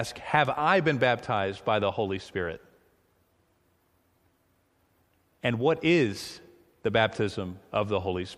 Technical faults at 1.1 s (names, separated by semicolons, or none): none